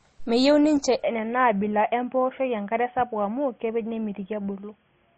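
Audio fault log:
throughout: transcoding between lossy codecs, likely an MP3 chain re-encoded to Opus; stacked artefacts of both codecs, with nothing above 8.4 kHz.
1.04–5.18 s: input switched to a poorer device, likely a headset call profile; the band abruptly narrows to 3.4 kHz, turning boxy without a gap or level change, with faint new noise far below the speech.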